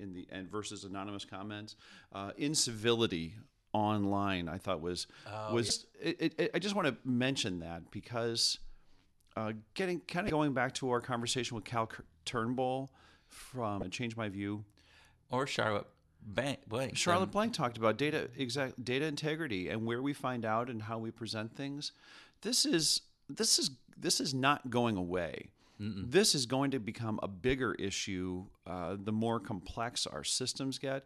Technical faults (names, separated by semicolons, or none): damaged data in a compressed stream